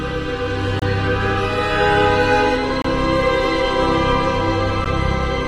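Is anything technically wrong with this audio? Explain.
Yes, there are three short gaps between stream segments, at 0.79 to 0.82 s, 2.82 to 2.85 s, and 4.84 s. The segment timestamps don't quite meet every 2 s, so the player fills each hole with hard-edged silence of about 26, 25 and 14 ms. Nothing is actually lost.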